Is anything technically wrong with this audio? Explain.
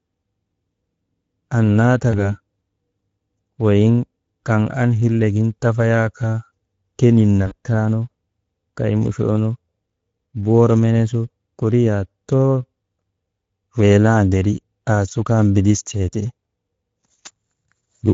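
Yes, there are two. Throughout the clip, the speech carries Speex codec damage: a hoarse, noisy graininess layered on every syllable. Too few bits go to the CELP excitation, so the voice turns noisy and hoarse. This fits a rate near 16.8 kbps. Unlike MP3-style swirl, the roughness stays inside the voice itself.

VoIP packet loss concealed by the speech codec occurs at 2.11–2.37 s (about 20 ms missing) and at 7.47–7.53 s (about 40 ms missing). The decoder repeats its last pitch and filter at falling gain, giving a brief, fading smear of stretched sound. The speech stays weak or distorted after the gap, where a plain dropout would fall to silence.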